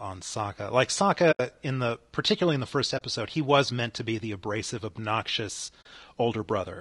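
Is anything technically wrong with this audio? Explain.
Yes. Throughout, the speech sounds rough and grainy, with noise filling the gaps between pitch harmonics and a thin, somewhat synthetic top band. This is likely low-delay AAC compression at around 32 kbps, whose short frames resolve harmonics poorly.

AAC frame loss with muting happens three times: from 1.31 to 1.40 s, just before "in the particularly in"; from 2.97 to 3.02 s, between "particularly in the first" and "he was meant to"; and from 5.81 to 5.86 s, right after "be the abrasive obnoxious". Each time, missing frames were decoded as silence, and the overlapping windows fade the sound out and back in. The result is a soft-edged hole, which distinguishes it from a hard dropout.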